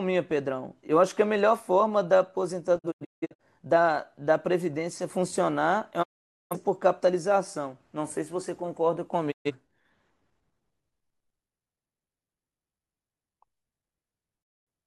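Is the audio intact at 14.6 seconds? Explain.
No. At 14.6 seconds the speech is inside a digital broadcast dropout running from about 14.42 to 14.68 s. The receiver stopped getting usable frames and muted, fading out over about 20 ms into roughly 213 ms of silence, a gap that fits about five lost frames. The programme then resumes further on, and what was sent during the hole is gone. An analogue fade would bring hiss or static, and a concealment scheme would smear the sound. This is a clean quick fade to true silence, which marks it as a digital mute.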